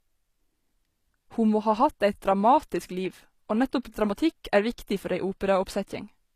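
Throughout the speech, nothing is present above 14.9 kHz, and the artefacts of a very low-bitrate encode remain. This is likely low-bitrate audio saved at a high bitrate. A genuine 320 kbit/s MP3 would sound clean, but these losses point to a 24 kbit/s HE-AAC source that re-encoding cannot restore.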